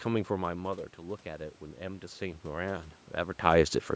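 From 1.23 s to 3.81 s there is automatic gain rising. The speech level at the microphone has dropped by about 9 dB, as when a talker moves back from the microphone around half a second in. The gain control hears the quieter input and slowly raises its gain, by about 8 dB in all. The voice swells back up over more than two seconds. The room noise swells with it, so the background grows louder along with the speech.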